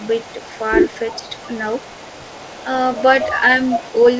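Speech carried over a call, with nothing above 8 kHz, which fits a wideband codec such as G.722. An echo leak runs through much of it. A delayed copy of the voice sits under the speech from 0.03 to 0.58 s and from 0.89 to 2.65 s, trailing by about 368 ms. It starts very faint, roughly 30 dB down, then rises to roughly 25 dB down. Later the delay shortens to about 236 ms, at 2.92 to 3.03 s, 3.2 to 3.38 s and 3.65 to 4.02 s. The copy grows loud here, close to the direct voice by the end. The cause is likely an echo canceller on a loudspeaker side letting its own playback back into the call. At 1.17 to 1.3 s the voice dips sharply, by about 15 dB, for roughly 150 ms. This is speech suppressed in double talk. Both sides seem to overlap there. The canceller likely could not tell the talker from the echo and turned both down.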